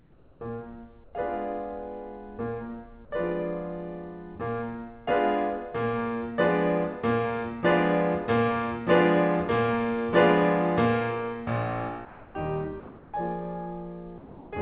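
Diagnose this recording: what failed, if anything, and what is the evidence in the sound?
Comfort noise is standing in for the background in the quiet stretches of this music, at 0.0–0.41, 1.04–1.13, 12.05–12.35, 12.8–13.13 and 14.18–14.51 s. In each stretch the real room sound gives way to a steady, featureless hiss, about 3 dB louder at the start and up to about 3 dB quieter later. A noise gate would leave silence in these gaps, not hiss. The stage is call processing: discontinuous transmission likely stopped sending audio during pauses, and the receiver synthesised noise in its place. Nothing above 4 kHz survives, which fits a G.711 call codec.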